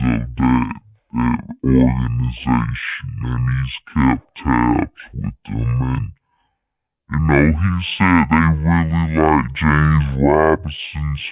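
Throughout, a wrong sample rate: playback runs at half the recorded rate without conversion, likely 8 kHz against 16 kHz, so speech plays at half speed, a full octave low.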